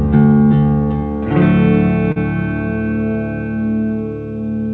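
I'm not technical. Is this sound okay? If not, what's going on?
No. At about 2.12 to 2.19 s the music briefly sticks: a short stall from a late packet. One piece of the audio arrived late over the call connection, so the receiving end stretched the last sound for about 40 ms until it came, then carried on from the same spot. Nothing is lost, but that moment is held slightly too long.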